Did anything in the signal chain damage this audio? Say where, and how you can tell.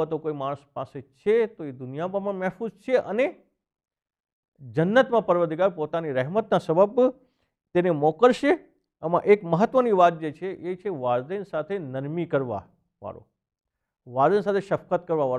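No, nothing in the signal chain damaged this audio at any stage.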